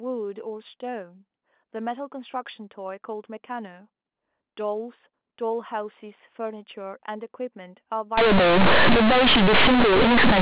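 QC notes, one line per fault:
8.18–10.41 s, companded audio read as linear: the last 2.2 seconds turn into loud, harsh buzz. Until then the mu-law telephone-band speech sounds as expected, capped at 4 kHz. Here the mu-law bytes are played as plain linear 8-bit samples with no expansion. Every sign change throws the output across about half its range. Quiet passages become as loud as peaks, and the waveform is badly bent. Pauses fill with strong noise.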